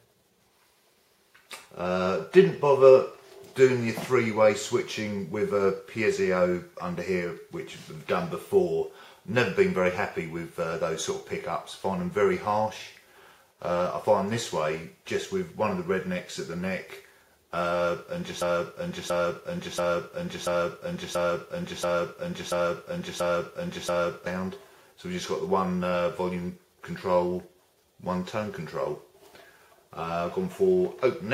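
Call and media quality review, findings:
Broken-record loop, 18.42–24.26 s: a 0.68 s fragment repeats exactly, back to back, nine times; intervening audio lost. Likely cause: player, encoder or stream stalled, re-sending its last buffered fragment until recovery.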